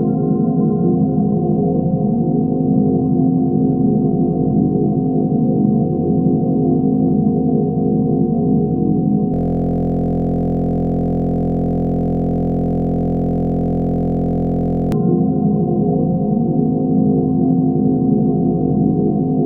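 System hang loop from 9.34 s to 14.92 s: the audio stops moving forward and a single 23.22 ms fragment repeats about 240 times, producing a steady buzz at about 43.1 Hz rather than a stutter. The system or its audio driver froze while the playback hardware kept cycling through the last filled ring buffer, and a loop that short fits a 1024-sample buffer. Normal audio resumes after 14.92 s.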